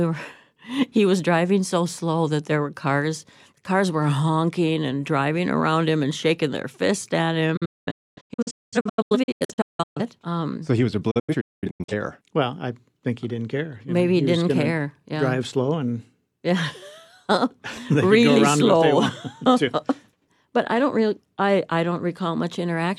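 A speech clip with two digital broadcast dropouts, where the receiver mutes whenever incoming frames fail and resumes once clean ones arrive. From 7.57 to 10.01 s the audio breaks into a string of short silences totalling about 1.6 s, the longest 256 ms. From 11.11 to 11.94 s it happens again, about 0.47 s lost, longest 213 ms. A waveform shows flat gaps with 8 ms fades at their edges, and a spectrogram shows blank vertical bands across all frequencies.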